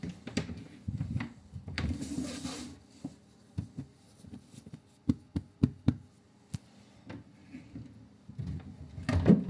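Listening through this recording of sounds, nothing stood out as a technical problem at any point.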